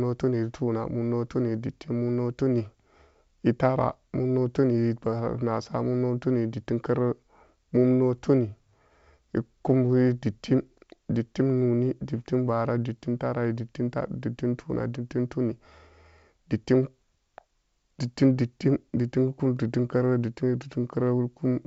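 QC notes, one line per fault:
Nothing to flag here, just speech carried over G.722 wideband telephone coding at 64 kbit/s, with at most a faint trace of that coding to be heard.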